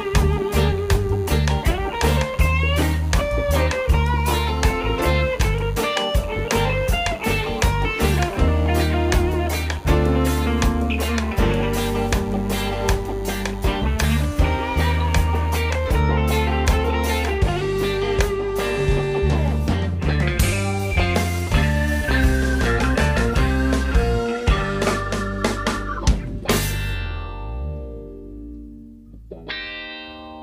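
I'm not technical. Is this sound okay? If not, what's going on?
No, not entirely. From the start until about 15.9 s there's a faint, thin buzz underneath: DECT cordless phone buzz. A nearby cordless phone's base sends a radio pulse 100 times a second, and the audio gear picks it up as a steady hum.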